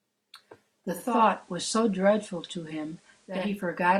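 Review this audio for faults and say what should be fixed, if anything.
Digital radio blending to analogue, 0.87 s to 3.63 s: the receiver lost its digital signal and cross-faded over 426 ms to the station's FM broadcast and later back. During that stretch the speech carries a faint hiss well below it, at an unchanged level.

To prevent it, improve digital reception with a better-placed antenna or take the programme from a direct stream rather than an over-the-air hybrid receiver.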